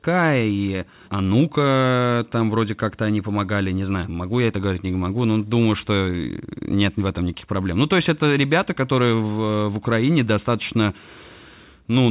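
Speech over A-law G.711 telephone coding, band-limited to 4 kHz with the usual faint level-tracking quantisation noise; no faults heard.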